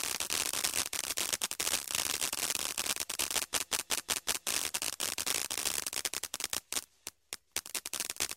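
From 3.53 to 4.46 s, a system hang loop repeats one 186 ms piece five times, a stutter at about 5.4 Hz that fits an 8192-sample buffer.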